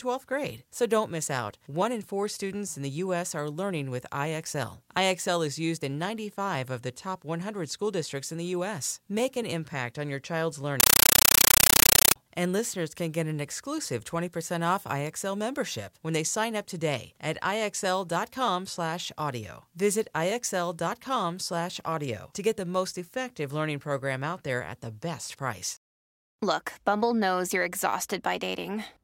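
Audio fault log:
10.8–12.16 s: compressed stream played as audio. The speech gives way to very loud, chattering static. Bursts of about 9.3 ms repeat 31.25 times a second with silence between, which fits an undecoded AC-3 stream, around 448 kbps, being read as ordinary samples.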